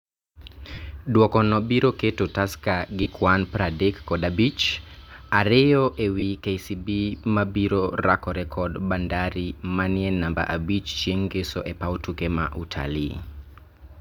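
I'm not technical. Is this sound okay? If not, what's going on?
No, not quite. There are four short dropouts, at 0.74, 3.03, 6.20 and 11.63 seconds, each lasting roughly 20 to 40 milliseconds. These are lost LE Audio frames: bits of the wireless Bluetooth stream went missing, and the receiver papered over each gap by repeating the last bit of sound with its detail scrambled. So instead of a clean cut, the speech briefly turns into a noisy smear before it carries on.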